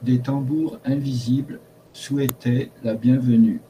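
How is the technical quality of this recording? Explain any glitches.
Two glitches stand out in the speech.

From 1.86 to 1.94 s, just after "des tambours invisibles", the sender has likely stopped transmitting during a pause, as with Opus DTX, so the receiver substitutes comfort noise in place of the background. For about 80 ms, the room sound, sitting about 34 dB below the loudest passages, becomes a flat, featureless hiss about 2 dB quieter.

At 2.29 s, an uninitialised buffer reaches the output before any audio was written into it, so stale memory plays as samples. The result is a very short, loud crack of digital noise, lasting about 1.3 ms, which fits a 64-sample block.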